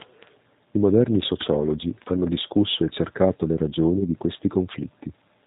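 From the start, the speech carries plainly audible G.729 codec damage, consistent with the G.729A variant at 8 kbit/s. The codec models each 10 ms frame as a vocal tract filter excited by a pitch predictor and a handful of pulses, so the result sounds slightly rough and synthetic. Nothing above 4 kHz survives, which leaves the sibilants dull and the overall tone narrow and boxed in.

At 3.98 s, just after "discusso e cercato le", VoIP packet loss concealed by the speech codec sets in and lasts until about 4.04 s. The missing stretch is about 20 ms, which fits two lost codec frames. The decoder fills the gap by repeating its last pitch and filter state at falling gain. The sound briefly stretches into a fading buzzy tone or coloured noise, and the voice stays weak or distorted for a short while afterwards because the decoder's frame-to-frame state needs time to recover.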